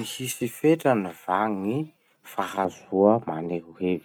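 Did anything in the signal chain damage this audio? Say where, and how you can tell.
Yes: de-emphasis applied wrongly from 2.65 s to the end. An unneeded treble-cut filter slopes the response down, about 11 dB at 10 kHz against 1 kHz, muffling the speech.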